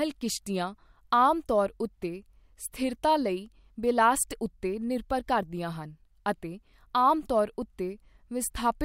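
No technical faults are audible.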